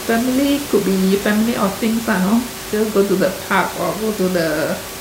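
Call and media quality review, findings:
No system faults found in the speech; room noise sits about 11 dB below the speech and belongs to the recording environment.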